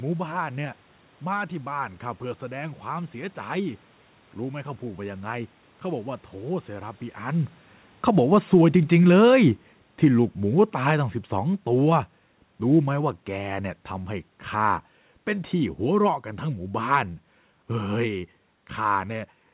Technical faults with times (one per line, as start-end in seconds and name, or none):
7.92-13.25 automatic gain falling